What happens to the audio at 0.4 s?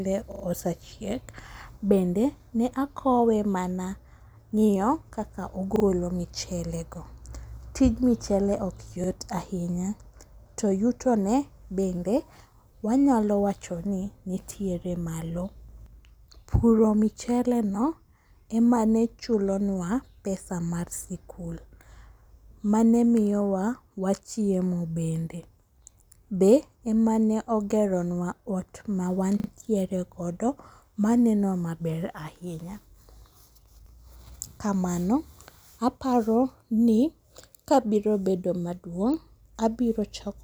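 Repeated buffer, 0.32 to 0.44 s: new audio arrived late, so the device replayed one 40 ms piece three extra times, a stutter with hard joins.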